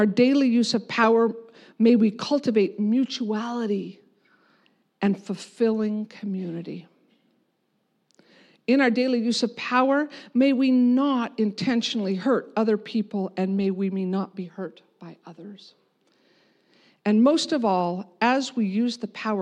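No technical faults can be heard anywhere in this speech recording; the signal holds steady throughout.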